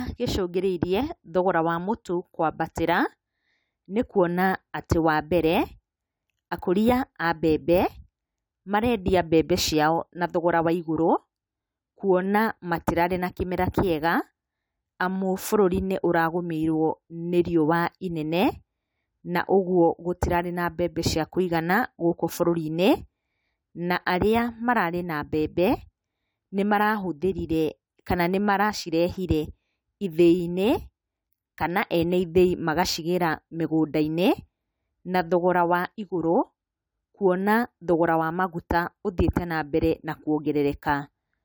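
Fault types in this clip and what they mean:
Low-bitrate audio saved at a high bitrate, throughout the speech: this MP3 carries far more data than its content needs, and the sound points to a source that had likely passed through an earlier, much leaner encoding, such as AAC at around 64 kbit/s. Re-encoding at a high rate near 177 kbit/s keeps whatever the first codec discarded missing for good. Nothing is present above about 20.2 kHz.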